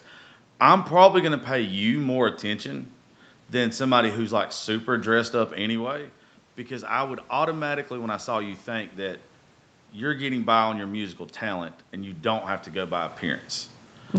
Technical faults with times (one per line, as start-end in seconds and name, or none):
10.01-13.51 automatic gain rising